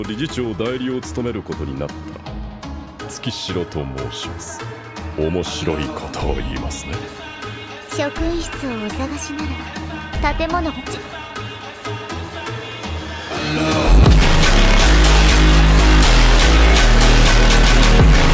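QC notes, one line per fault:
No faults heard in this clip.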